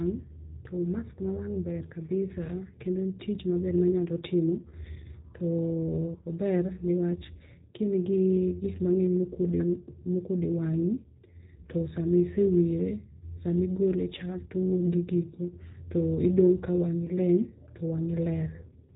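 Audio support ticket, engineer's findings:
G.729 codec damage, whole clip. Nothing above 3.8 kHz; speech plainly rough, slightly synthetic. Unlike a simple low-pass, which only dulls the sound, the roughness comes from a vocal tract model rebuilding speech from sparse pulses. Fits an 8 kbit/s G.729A path.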